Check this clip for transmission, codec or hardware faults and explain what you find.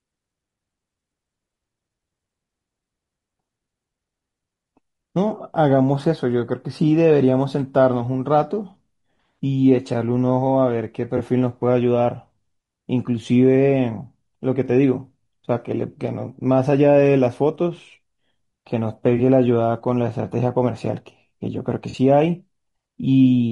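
Two faults are present: codec damage across the whole speech clip, and three brief dropouts patched over by the decoder.

The low-delay AAC compression is most likely AAC-ELD at a low rate, fitting about 32 kbps. Its short frames can't resolve pitch harmonics finely and leave few bits per frame, so the voice sounds rough and grainy throughout, with noise filling the gaps between harmonics and a thin, synthetic-sounding top band.

AAC frame loss with concealment occurs at 11.17 s and 19.17 s, each about 20 ms long, and at 21.89 to 21.95 s, about 40 ms. When a frame goes missing, the decoder rebuilds it from the last good spectrum, so each spot becomes a smeared, noisy or phasey blip rather than a hard gap.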